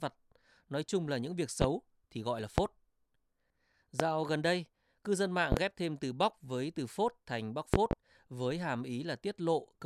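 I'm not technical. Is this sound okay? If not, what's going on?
No. There are loud pops, sharp bangs much louder than the speech, at 1.62–1.66, 2.58–2.62 and 4.00–4.04 seconds. Double pops come at 5.52–5.61 and 7.74–7.95 seconds. The speech continues underneath. A likely cause is an electrical jolt from a plug, switch or static.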